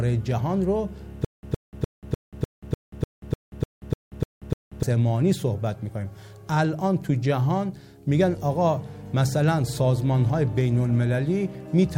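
The playback likely stalled from 1.25 to 4.83 s, retrying over and over with nothing new to play, which produces a stutter with silent gaps. Each retry replays the same fragment of about 115 ms, then drops into roughly 184 ms of digital silence, so the burst returns twelve times at an even 299 ms pace. It sounds mechanical and clipped, and whatever audio belonged in that stretch never arrives.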